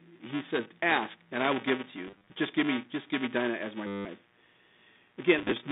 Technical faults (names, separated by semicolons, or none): mains buzz; buffer tearing; packet loss with last packet repeated